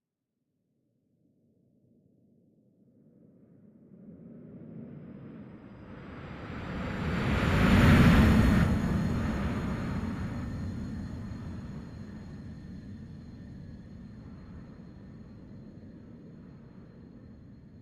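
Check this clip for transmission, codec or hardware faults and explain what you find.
One fault stands out. Skip ahead at 8.63–8.65 s: roughly 0.7 s of audio was dropped while later audio was queued, so playback jumps forward with no gap, splicing the two sides abruptly.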